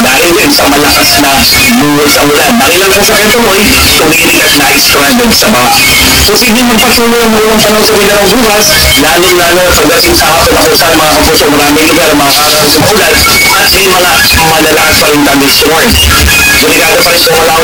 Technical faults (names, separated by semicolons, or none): signed and unsigned mixed up